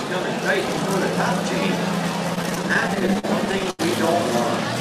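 At 0.68 s, chunks arrive out of order. For about 85 ms, to 0.77 s, the sound is jumbled. A chunk of roughly 43 ms was written one chunk late. It plays after the chunk that should follow it. Nothing is lost. The order is simply wrong. That creates three hard joins where unrelated waveforms meet. The brief passage sounds garbled, as if the sound tripped over itself.

From 2.35 s to 3.81 s come repeated stalls, a stutter. Packets kept arriving late or too slowly. The jitter buffer ran dry again and again, 19 times across that stretch. Each time, the receiver stretched the last sound to cover the wait. The longest gap runs 81 ms, and fading is heard there. In total about 292 ms is filled this way, roughly a fifth of the span. No audio is missing. The sound drags and hiccups instead.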